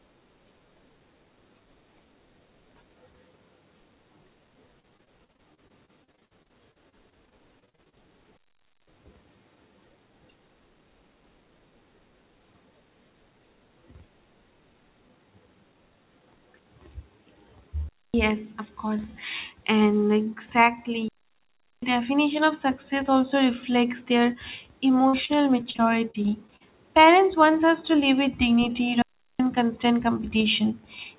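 Speech over a call link band-limited to 4 kHz, which fits a narrowband telephone codec. Repeated packet loss (robotic sound) occurs from 4.8 to 7.95 s and from 25.08 to 26.62 s: packets keep going missing, and each gap of up to about 54 ms is patched by extending the last sound, leaving the speech choppy with pieces missing. Digital wireless dropouts, where the radio link loses too much data and the receiver mutes cleanly with no noise burst, cut the audio to near silence at 8.37 to 8.87 s, 17.89 to 18.14 s just before "of course", 21.08 to 21.83 s before "definition of success also", and 29.02 to 29.40 s right after "to live with dignity".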